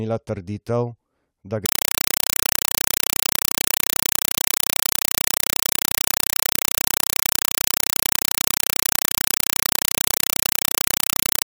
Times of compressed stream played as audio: 1.66-11.46

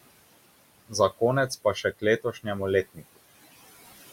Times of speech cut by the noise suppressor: 1.49-2.46, 2.94-3.18

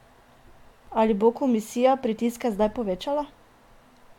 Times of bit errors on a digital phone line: none

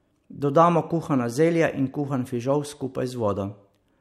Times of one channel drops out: none

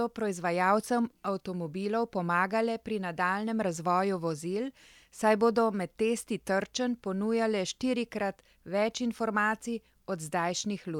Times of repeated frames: none

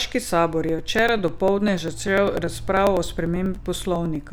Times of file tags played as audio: none

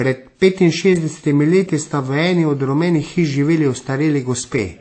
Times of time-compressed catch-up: none

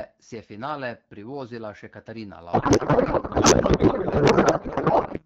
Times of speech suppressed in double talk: none

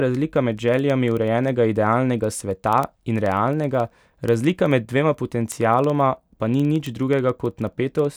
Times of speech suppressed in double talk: none

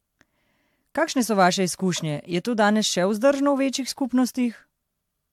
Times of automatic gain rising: none

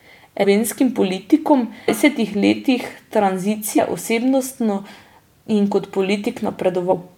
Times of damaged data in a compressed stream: 0.43, 1.88, 3.77, 6.91

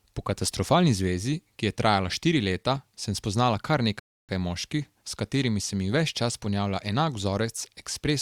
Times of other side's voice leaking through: none

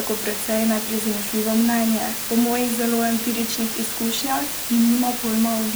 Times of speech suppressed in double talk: none

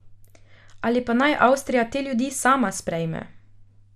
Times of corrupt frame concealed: none

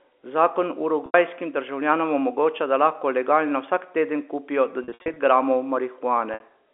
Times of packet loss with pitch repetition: 1.06-1.14, 4.84-5.16, 6.34-6.40

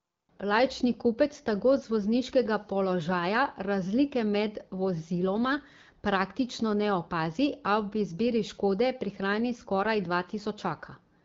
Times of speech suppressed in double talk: none

